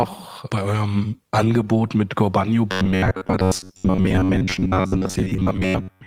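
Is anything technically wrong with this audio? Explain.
Yes. From 2.72 s to 6.06 s, starved audio was likely patched by looping one short buffer for most of that stretch, producing robotic sound from repeated short buffers: a rigid, metallic 93.8 Hz buzz.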